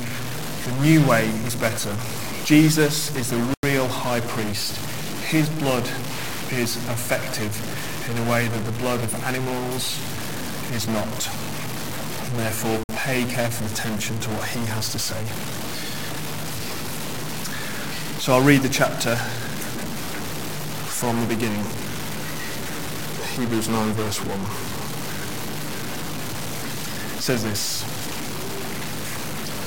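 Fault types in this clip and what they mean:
Stuck bit: A distortion runs through the whole clip, and quiet stretches fill with a noise floor that shouldn't be there. This likely comes from one data bit held fixed. About half the sample values land off by that bit's weight.
Bluetooth stall: The sound drops to silence twice, at 3.54 s for about 94 ms and at 12.84 s for about 55 ms. Each time it resumes afterward. A likely cause is wireless packets arriving late, so the playback buffer emptied and waited.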